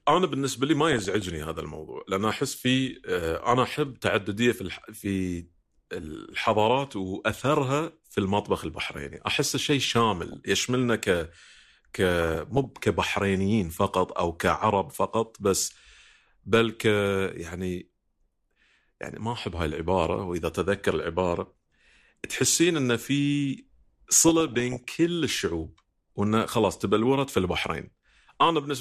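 Speech runs through the whole clip with a dull, band-limited tone. The top end is missing and the remaining detail sounds grainy and gurgly. Upper frequencies seem to drop in and out. This is likely MP2 compression, MPEG Layer II, starved of bits. The damage is plainly audible and fits a rate of around 80 kbps. Sub-bands lose their bits and switch off, and the bands left are coarsely quantised. On top of this there is DAB burbling in four bursts: 0.87 to 1.32 s, 10.21 to 10.75 s, 12.22 to 12.65 s and 24.19 to 24.90 s. The last one is the longest and roughest. Bit errors from weak reception slip past error correction into the audio data. Corrupted samples put short blips of noise in single sub-bands, and corrupted scale factors make sub-bands jump in level for up to a frame. The error rate points to a fraction of a percent, highest near half a percent at 24.19 s.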